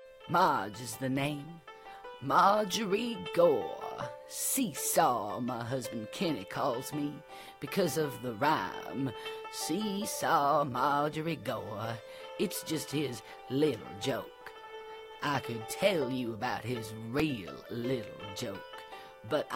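At 17.20 s there is a repeated buffer. New audio arrived late, so the device played its last block once more. That block lasts 1.45 ms, which fits a 64-sample buffer. The repeat is so short it sounds like a single click.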